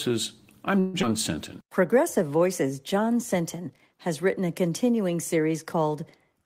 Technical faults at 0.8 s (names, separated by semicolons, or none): call audio freeze